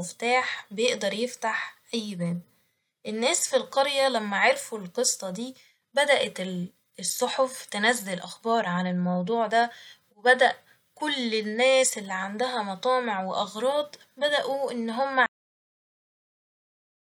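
At 15.26 s the speech has a cut-off end: the final stretch of audio was never written out, so sound stops mid-utterance with no natural decay. On a waveform it drops abruptly to a flat line of digital silence, and a spectrogram shows a hard vertical edge.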